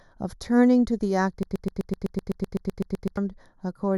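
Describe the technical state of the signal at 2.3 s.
At 2.3 s a broken-record loop is running, spanning 1.43 to 3.17 s. A 0.13 s fragment repeats exactly, back to back, 14 times, likely from a stalled stream. On the waveform it appears as identical repeating blocks.

Channel delay (comb filtering) is also present at this point. One channel lags by roughly 0.2 ms before mono summing, which gives a hollow, phasey tone. A spectrogram shows fixed dark notch bands starting near 3 kHz.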